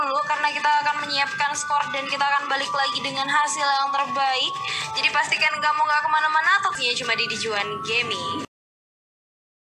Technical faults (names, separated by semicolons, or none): none